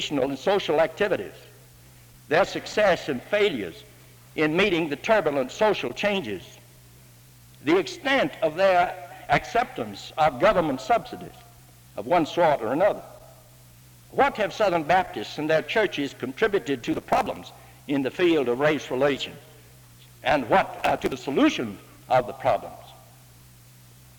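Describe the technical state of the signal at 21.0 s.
At 21.0 s the signal is in the middle of a burst of processor overload crackle that runs from 20.79 to 21.12 s. The processing cannot keep up with its short buffers, of roughly 5 ms each, and dozens of deadlines are missed in quick succession. Each missed buffer is skipped entirely, leaving a small hard-edged hole. Strung together, these holes give a gritty, tearing crackle over the sound that stops once the load clears.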